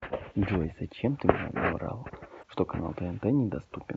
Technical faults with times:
2.39-2.44 damaged data in a compressed stream

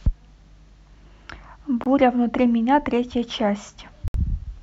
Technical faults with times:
1.84-1.86 Bluetooth stall
4.08-4.14 Bluetooth stall

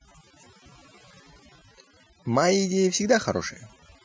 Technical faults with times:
0.00-4.05 overdone noise removal

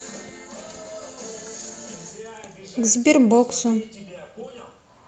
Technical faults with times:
1.59-1.69 lost packet rebuilt from error correction

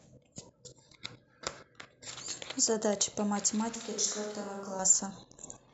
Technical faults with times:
3.75-4.79 switch to a distant microphone

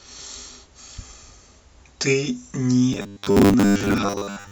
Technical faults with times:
2.93-4.51 robotic sound from repeated short buffers

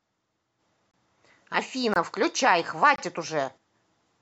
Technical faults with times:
0.91-0.94 gap between chunks
1.94-1.96 gap between chunks
2.96-2.98 gap between chunks

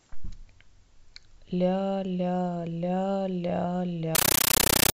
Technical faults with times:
4.15-4.93 compressed stream played as audio

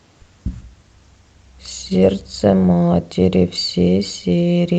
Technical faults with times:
0.62-3.03 call bitrate drop

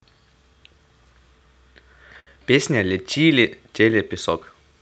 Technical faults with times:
2.19-2.31 short stall from a late packet

